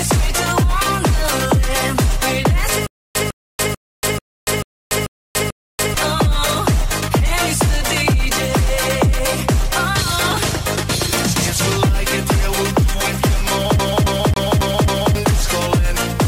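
From 2.87 s to 5.94 s, a short burst of about 0.15 s plays, cuts to dead digital silence for about 0.29 s, then returns unchanged. This happens seven times at a steady 0.44 s pace. This is a stutter with silent gaps. The likely cause is a player or stream that kept stalling, replaying its last buffered fragment at each retry before running dry. The audio meant for that stretch never arrives.

From 13.79 s to 15.15 s, a slice of about 0.27 s repeats five times in quick, even succession, each jump marked by a brief mute. It is the stutter of a CD stuck on one turn. A scratch knocks the laser back one track at the same point on every rotation, so the same fragment keeps replaying.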